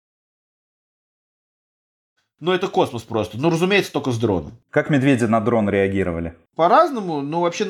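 No technical faults can be heard in this speech.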